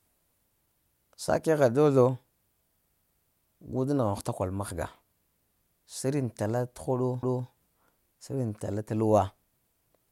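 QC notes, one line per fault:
7.23–7.48 s, overlapping chunks: the speech stutters here, with a 250 ms slice playing twice. The audio was handled in 4.0 s chunks, and this one started before the last had ended, so the shared bit gets replayed as a quick hiccup at the join.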